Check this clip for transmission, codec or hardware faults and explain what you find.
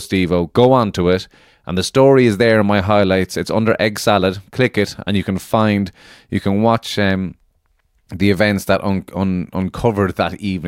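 No transmission, codec or hardware faults can be heard anywhere in the speech; the signal holds steady and continuous throughout.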